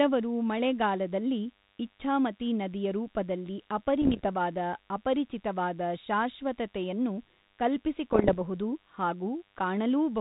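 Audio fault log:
throughout, DECT cordless phone buzz: a thin, steady buzz sits about 35 dB below the speech from start to end, repeating at 100 Hz with a dense stack of harmonics. A nearby DECT handset or base sends a radio burst every 10 ms, and the audio circuitry rectifies each one into a click. Unlike mains hum, it is edgy and rasping rather than a smooth low tone, and it never varies with the speech, which sits on a lightly coded 32 kbit/s G.726 channel.
4.02–4.27 s and 8.12–8.37 s, bit errors on an ADPCM link: two quarter-second patches of pops and rough, crackly bursts, the first just after "ಮಳೆಗಾಲದಲ್ಲಿ ಇಚ್ಛಾಮತಿ ನದಿಯ ರೂಪದಲ್ಲಿ", with the level briefly jumping and sagging. Roughly one to two percent of bits arrive flipped, and each error corrupts the decoder's step size and prediction, so the damage smears on for milliseconds. Packet loss leaves gaps or repeats, but this rings and lurches.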